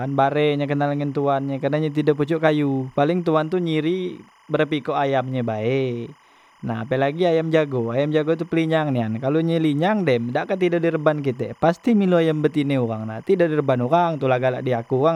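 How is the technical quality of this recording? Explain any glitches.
The speech is marred by one steady problem that runs the whole length of the clip: timecode bleed. A faint chirping warble sits well under the voice, roughly 35 dB down. Linear timecode at 25 frames per second has leaked across from a neighbouring track or cable, its square wave flipping between tones near 1 and 2 kHz, which makes that busy, twittering texture.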